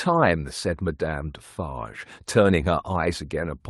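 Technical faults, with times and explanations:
No technical faults are present.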